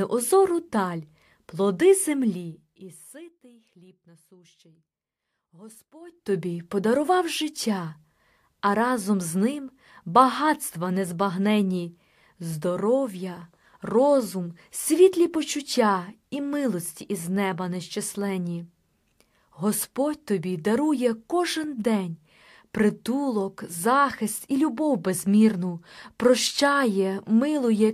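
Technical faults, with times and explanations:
2.16–3.40 s and 6.01–6.36 s, zipper noise: after "даль плоди" the speech drops about 25 dB, and before "подарував життя" it rises by a similar amount. Each change moves in unsmoothed steps, around a hundred a second, and each step clicks. That gives a fine ticking buzz, where a smooth fade would be silent.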